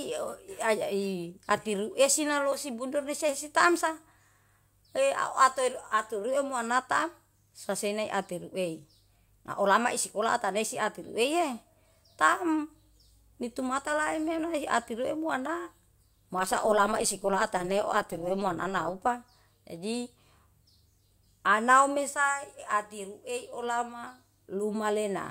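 From 16.39 to 19.07 s the speech carries overlap-add ripple. The frames were rejoined with an overlap that fails to sum to constant gain, so level swings by about 11 dB once per frame, around 200 times a second, giving a metallic buzz with extra tones around the voice.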